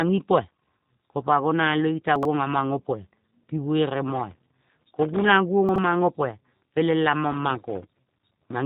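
Throughout, the speech carries the roughness of the G.729 codec: a buzzy, slightly synthetic quality from the filter-and-pulse reconstruction, with nothing above about 3.8 kHz. The damage is plainly audible and fits an 8 kbit/s G.729A stream.

From 2.16 to 2.25 s the chunks play out of order. A section of roughly 23 ms is heard about three chunk lengths after its proper place. Nothing is missing, but the sound briefly jumbles where the order breaks.

Between 4.08 and 5.32 s there is processor overload crackle. Audio buffers of well under a millisecond each are missed repeatedly, on the order of 150 of them, and each miss leaves a tiny silent gap with abrupt edges. Together the gaps form a gritty tearing that rides on the speech until the load clears.

From 5.69 to 5.78 s the same chunks-out-of-order fault recurs, with a segment of about 23 ms arriving three chunks late. The result is another short garbled moment.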